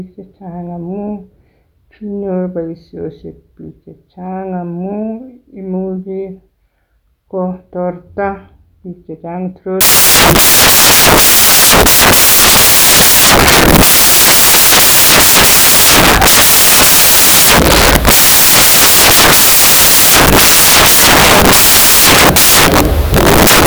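A speech clip that turns into loud, harsh broadband noise from 9.81 s, just after "kotorta biik chechang", and stays that way to the end at 23.67 s. The cause is samples built from the wrong bytes: the reader misassembles each sample, so the rapidly changing low bits land in the high-order position. Unlike added background hiss or clipping, the noise is loud, harsh and broadband.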